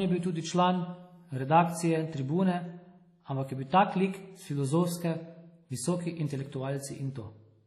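Throughout the speech, heavy transform-codec damage is audible, likely WMA compression at a rate that fits about 32 kbps. Quantisation noise smears around each syllable, giving a ringing, washy texture with hiss that swells and fades with the voice, and nothing remains above 13.2 kHz.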